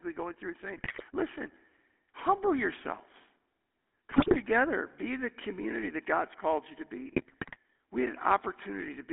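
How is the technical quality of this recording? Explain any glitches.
The quality is poor: plainly audible phone-codec coloring with three bursts of decoding damage. Throughout, the GSM full-rate codec thins the speech to roughly 250 Hz to 3.4 kHz, consistent with 13 kbps coding. Its coarse pulse excitation adds a constant buzzy, gravelly roughness rather than the watery swirl of a modern codec. GSM bit errors occur at 0.76–1.04 s, 4.10–4.36 s and 7.08–7.56 s. Corrupted filter, pitch and gain values produce squawks, pops and gargling, rather than the silent gaps that dropped packets would leave.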